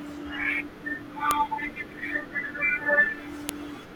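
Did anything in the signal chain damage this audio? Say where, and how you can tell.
Yes. A file header played as audio at 1.31 s and 3.49 s: joined WAV pieces kept their header bytes, giving sharp clicks that show as spikes about 1 ms long and thin broadband vertical lines.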